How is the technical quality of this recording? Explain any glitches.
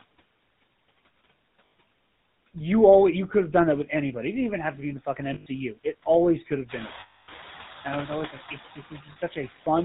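The recording is heavily degraded: a low-rate mobile codec and aggressive noise suppression colour the whole clip, and several brief dropouts break up the speech.

Noise suppressor artifacts are present throughout. The suppressor pulls steady background noise down by about 15 dB, frame by frame, so the noise dips between phrases and swells beneath them. Unlike a codec fault, this tracks the noise level, not the voice.

The GSM full-rate codec, whose sound fits the 13 kbps full-rate coder, gives the voice a plainly audible buzzy, gravelly roughness and removes everything above 4 kHz. It models the vocal tract and excites it with coarse, regularly spaced pulses. That rasp is tied to the voice, not to the background.

Lost GSM frames occur at 1.67–1.72 s, at 5.34–5.47 s just after "be in the fucking", at 7.00–7.29 s just before "and i was always", and at 9.12–9.17 s. Each time, the decoder repeats the last good frame, producing a rough, metallic held ring. 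The longest loss, about 280 ms, stretches that ring out longest, which separates it from an ordinary gap.

Noise suppressor catching up happens at 6.68–6.89 s, after "it always could have". The room noise jumps by about 15 dB around six and a half seconds. The suppressor's estimate lags, so the noise is cut by only about 4 dB at first, then sinks over roughly 210 ms. It is a gradual fade, not an abrupt step.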